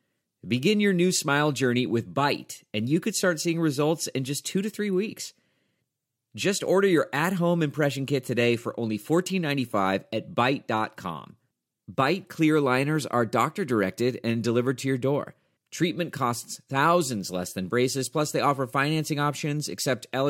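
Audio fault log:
No technical fault can be heard anywhere in the signal.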